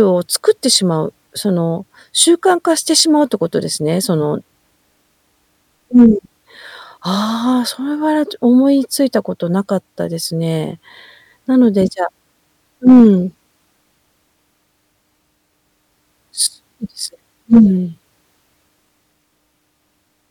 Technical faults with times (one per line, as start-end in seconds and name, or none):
0.73-0.76 hard clipping
5.97-6.06 hard clipping
12.87-13.07 hard clipping
17.53-17.60 hard clipping